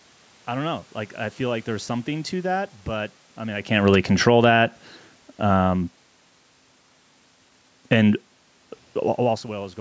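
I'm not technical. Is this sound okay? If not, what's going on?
No. From 3.72 to 5.93 seconds, automatic gain falling occurs: the call's level control judged the input too loud or its background noise too strong and gradually turned everything down, background included. Between 4.5 and 4.9 seconds, automatic gain rising briefly pushes the other way, so voice and room noise swell back up together for a moment. The level changes around 3.5 and 9 seconds sound like the talker shifting position.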